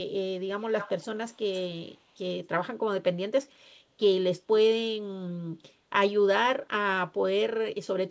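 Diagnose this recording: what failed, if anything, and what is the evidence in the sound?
Echo leak, at 0.59–1.37 s, 1.54–1.66 s and 1.87–2.0 s: a copy of the speech trails it by about 262 ms, starting roughly 15 dB down and then fading. This is likely a call-processing failure, with the far end's echo canceller letting its loudspeaker pickup through.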